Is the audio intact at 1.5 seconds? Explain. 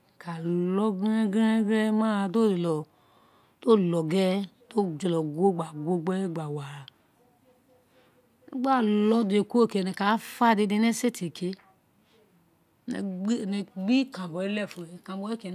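Yes, at 1.5 seconds the speech plays through cleanly, with no dropout, click, distortion or other fault at that moment.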